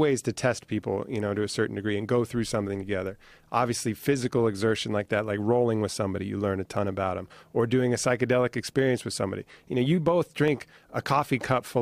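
Three isolated clicks cut through the speech at 2.55 s, after "degree and go through", at 6.77 s, after "somebody you learn a", and at 10.48 s, after "you know you both". Each is likely dropped samples: a fraction of a millisecond is missing, so the waveform jumps abruptly. Unlike a dropout, nothing audible is lost and no gap opens. Each is just one sharp tick, seen as a thin vertical line across the spectrum.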